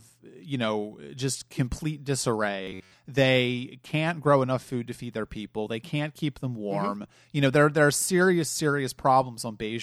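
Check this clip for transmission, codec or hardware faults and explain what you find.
There is one fault. From 2.63 to 2.94 s there is robotic sound from repeated short buffers. A roughly 11 ms chunk likely loops, giving a metallic 93.8 Hz buzz.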